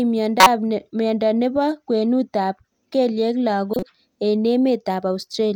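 Speech carrying two corrupt frames decoded, at 0.40–0.47 s and just after "kwenut ap kelyek" at 3.74–3.83 s. Damaged data is played as misplaced spectral energy, a loud error lasting a couple of frames, then a quieter one. Unlike a dropout or click, these are filled with foreign sound rather than silence or a single spike.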